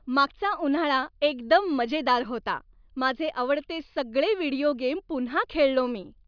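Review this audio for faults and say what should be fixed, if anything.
Nothing here needs fixing; I didn't hear any technical faults in this speech recording.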